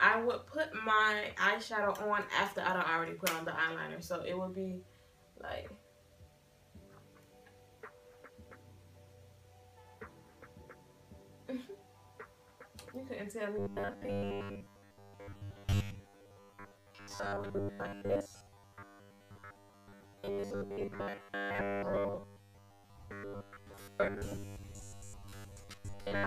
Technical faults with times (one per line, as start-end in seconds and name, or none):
13.59-26.27 robotic sound from repeated short buffers